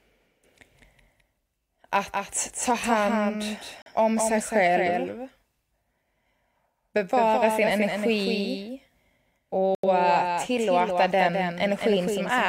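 Throughout the speech a second copy runs about a fifth of a second behind the first at about 5 dB lower, a doubled audio track, most likely from the signal being captured again through a slower path. It differs from a room echo or reverb because the trailing copy is full-band and never decays or gains room colour. It is one clean repeat, so every syllable is shadowed by an exact, slightly quieter twin.

At 3.82 s, between "att ta hand" and "om sig själv", the sound drops to silence until 3.91 s. This is a digital broadcast dropout: the receiver muted after bad data, losing about 43 ms, which fits a single lost frame. A second dropout at 9.75 to 9.88 s, just before "eh tillåta", loses about 85 ms, consistent with two frames. Unlike a buffer underrun, where playback stalls and then resumes from where it stopped, the speech here comes back further along, so whatever was sent during the gap is simply missing.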